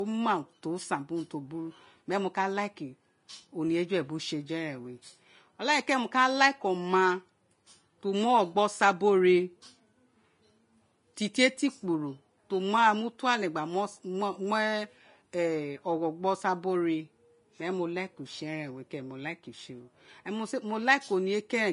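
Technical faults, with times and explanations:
Throughout: Vorbis compression, likely the cause of the hissy, grainy texture over the speech, which points to a low bitrate around 30 kbps. At that rate the encoder drops the top of the band and quantises the remaining treble so coarsely that fine detail turns into noise of similar energy, roughening vowels and softening consonant onsets. A spectrogram shows a hard ceiling on high frequencies and speckled, patchy treble; the waveform looks normal.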